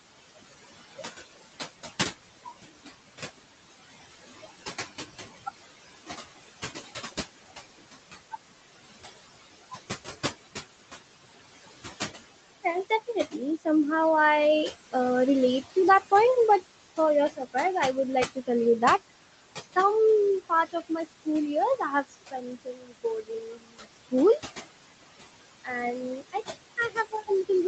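Noise suppressor artifacts run through the whole recording. The room noise sits only about 10 dB below the speech, and the suppressor pulls it down by about 19 dB, band by band and frame by frame. The background drops away in pauses and swells back under speech. On a spectrogram the noise floor looks patchy and flickering, dark between phrases and speckled with isolated blobs, all below 8 kHz.

Speech cut by the noise suppressor occurs five times, where the suppressor mistook quiet parts of the speech for noise. From 12.63 to 13.66 s, brief stretches totalling well under a quarter second are turned down by up to about 18 dB. From 16.97 to 17.55 s, after "to that point but" and before "I would", about a tenth of a second loses up to about 14 dB. From 18.26 to 19.77 s, following "I would", roughly 300 ms drops by up to about 21 dB. From 20.49 to 24.13 s, the longest spell, around a second and a half in total is cut by up to about 22 dB. 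From 25.64 to 27.3 s, roughly 300 ms falls by up to about 18 dB. These passages sound swallowed or faint. On the waveform the envelope shows sudden notches, and on a spectrogram consonant energy and word tails fade into the cleared background.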